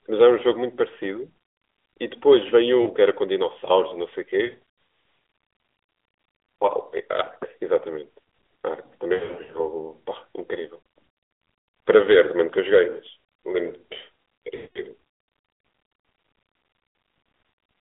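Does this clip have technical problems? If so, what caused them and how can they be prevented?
Yes, there are lost AMR speech frames at 2.82 s, 4.46 to 4.59 s, 9.14 to 9.66 s, 10.80 s and 14.56 to 14.80 s. Frames failed their checksum, so the decoder replayed the last good pitch and vocal tract settings at falling gain, giving a warble or a drawn-out, fading smear. Stronger radio coverage or better channel coding would prevent it.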